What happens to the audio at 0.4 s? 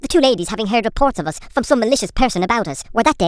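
Wrong sample rate at 0.4 s, as throughout: the speech runs 1.38 times fast and about 5.5 semitones high, which fits 16 kHz audio played at 22 kHz.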